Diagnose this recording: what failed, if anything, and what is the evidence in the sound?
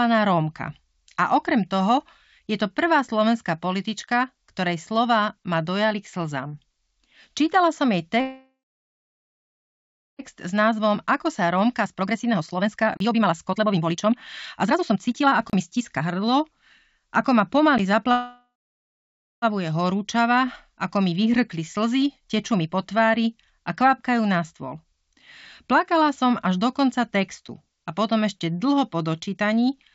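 Block of digital silence, at the driver or buffer stage. There are sharp little gaps in the sound. The short ones fall at 4.06, 17.78 and 27.48 s, the last sitting between "som až do konca" and "a potom ešte dlho". Each lasts about 10.7 ms, which fits a 512-sample buffer. Two longer ones, about 32 ms each, sit at 12.97–13.00 and 15.50–15.53 s. Each time the output buffer likely wasn't filled in time, so zeros went out with no fade.

Call audio freeze, network plus jitter buffer. Right after "som jej" at 8.21 s the sound stalls and smears into a fading buzz or hiss. About 1.6 s of it is dead quiet, and it picks up again at 10.22 s. That inserts roughly 2 s of gap with nothing actually lost. A second one runs from 18.12 to 19.45 s, about 1.3 s, with around 0.9 s of it silent. The likely cause is packets held up in transit until the jitter buffer ran dry, with the receiver stretching the last sound until they arrived.

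Jitter buffer speed-up, in call processing. After the stalls the receiver has extra delay banked, so it trims short pitch-period chunks to catch up. You hear the audio hurry along at the same pitch. From 10.35 to 14.15 s it runs at 135%, shaving off about 1.5 s. From 14.59 to 18.05 s it's 118%, about 0.7 s. Milder rushes come at 20.72–22.75 s (107%) and 24.53–25.15 s after "tvári a kvapkajú na" (110%). All of this rides on a G.722 call path with nothing above 8 kHz.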